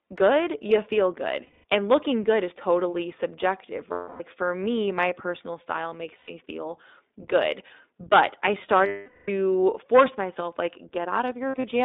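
An iLBC codec runs through the whole speech clip. The line is held to roughly 250 Hz to 3.7 kHz, and each 20 ms frame's excitation is coded on its own. The result is plainly audible codec damage: a rough, slightly synthetic edge on every syllable and no air above the narrowband ceiling. This fits iLBC's 15.2 kbps mode.

Lost iLBC frames cut into the speech at 1.44 to 1.65 s (about 200 ms), 3.92 to 4.22 s (280 ms), 6.18 to 6.31 s (100 ms), 8.86 to 9.30 s (420 ms) and 11.48 to 11.65 s. The last is 120 ms of losses scattered over 160 ms, with the longest run roughly 70 ms. In each gap the decoder loops the last pitch cycle blended with noise, so the sound becomes a held, buzzy, breathy vowel. In the 420 ms gap that vowel fades out. Because each frame stands alone, the voice returns almost immediately after every gap.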